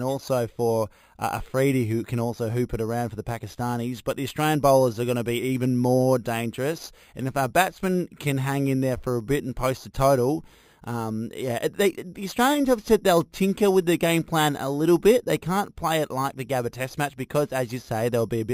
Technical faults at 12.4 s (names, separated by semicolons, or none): imaging from sample-and-hold upsampling